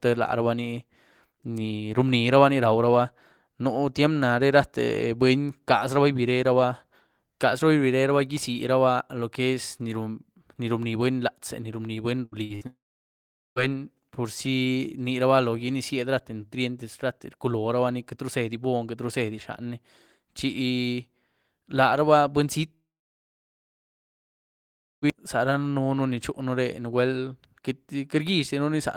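Bursts of packet loss at 12.25–12.35, 12.44–12.52 and 12.55–12.64 s come in quick succession. Each time about 60 ms of sound never arrived, and the receiver stretched the last fragment across the hole for roughly 55 to 65 ms. You hear it as a brief held buzz or hiss that sags in level before the sound jumps ahead, slightly out of step each time.

A long network dropout is the likely cause of the gap from 12.67 to 13.59 s. About 0.9 s of sound is missing. A short concealment tail quickly gives way to roughly 0.78 s of dead silence, and then the audio resumes with that stretch gone.

A second long network dropout is likely behind the gap from 22.75 to 25.07 s. Here about 2.3 s is lost. After the brief fading fill, the gap is essentially silent for about 2.2 s before the sound returns further along.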